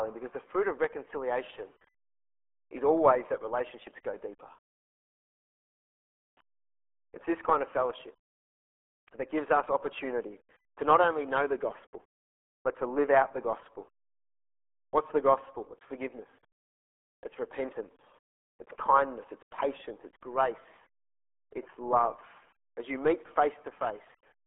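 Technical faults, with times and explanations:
Throughout, RealAudio 14.4 codec: muffled, gargly speech with nothing above 3.7 kHz, from a heavily squeezed 8 kbit/s dial-up stream confined to a telephone-like band.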